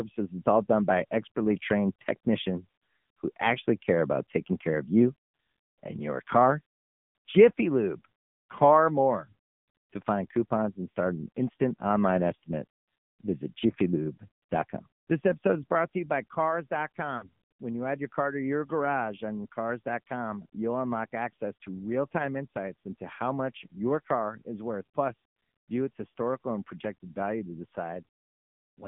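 AMR narrowband mobile codec, throughout: the speech passes only about 150 Hz to 3.5 kHz and sounds buzzy and synthetic, which fits a low AMR-NB bitrate near 7.4 kbps.

Lost AMR speech frames, 17.18 to 17.25 s: for about 40 ms, which fits two dropped 20 ms frames, the decoder repeats the previous sound at falling level, giving a brief smeared dip.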